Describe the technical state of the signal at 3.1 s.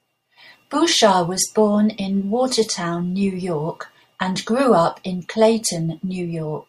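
At 3.1 s the speech signal is intact, with no audible fault.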